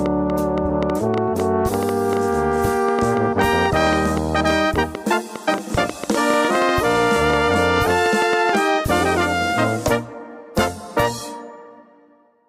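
Electrical interference from nearby equipment or a faulty connection or power supply is the likely cause of a train of clicks from 0.06 s to 8.56 s. Something keeps injecting short pulses into the signal at an uneven pace, averaging about 5.8 per second, which adds up to roughly fifty clicks. Each click has much the same shape and peaks well above the surrounding sound, by something like 15 dB. The result is an irregular ticking and popping laid over the audio and heard in the pauses too.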